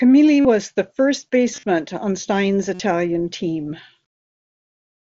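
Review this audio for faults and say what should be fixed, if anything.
Concealed Bluetooth headset packet loss occurs at 0.40–0.45 s (about 45 ms lost), 1.53–1.63 s (75 ms scattered, longest run 37.5 ms) and 2.74–2.80 s (about 52 ms). The receiver looped recent waveform to fill the gaps, giving buzzy held tones. On a spectrogram these show as repeated, evenly spaced harmonic stripes. On a waveform they show as periodic copies, with a small warble at resumption. Keeping the headset close to the phone and away from Wi-Fi congestion would prevent this.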